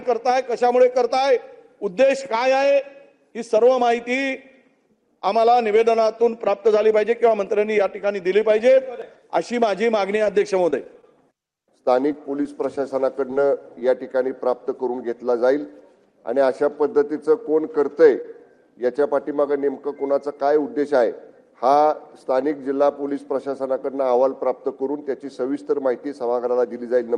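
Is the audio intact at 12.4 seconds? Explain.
No. 12.4 s falls inside a run of scattered short gaps from 10.15 to 13.82 s, where about fifteen tiny packet losses, none longer than about 15 ms, were patched by extending the preceding sound. That yields brief ticks and smears rather than one sustained dropout or silence.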